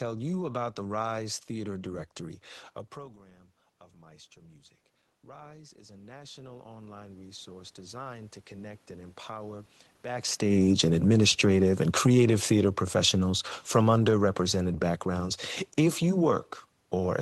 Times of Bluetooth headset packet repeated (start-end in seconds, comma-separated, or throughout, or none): none